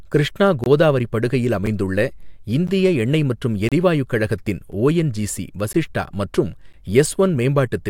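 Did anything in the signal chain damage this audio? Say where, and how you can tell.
Yes: gaps between stream segments during playback. Hard-edged silent holes at 0.64–0.66, 2.67, 3.69–3.72 and 5.73 s show as blank vertical stripes, where mistimed one-second segments leave silence.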